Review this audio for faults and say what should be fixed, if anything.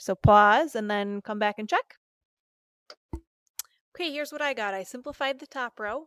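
Nothing needs fixing: no technical faults can be heard anywhere in the audio.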